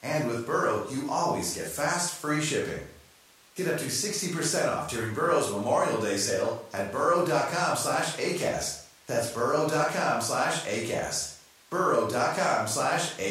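Speech recording with no audible technical faults.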